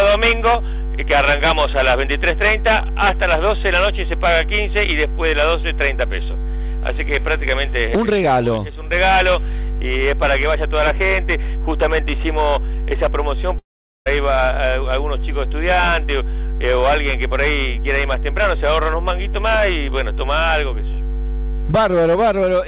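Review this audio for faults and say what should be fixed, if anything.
At 13.58 s the sound breaks up and doesn't come back until about 14.08 s, which points to a likely long network dropout. Around half a second of audio simply never arrived. The receiver stretched the last bit of sound into a buzzy tail that fades, and for about 0.42 s of the gap only silence remains. Playback then resumes further on, so the missing stretch is gone for good, not delayed. Because the call path's G.711 mu-law band stops at 4 kHz, that concealment tail sounds dull. To prevent it, fix the network side with a more stable link, or add redundancy or FEC, so a lost half-second doesn't reach the listener.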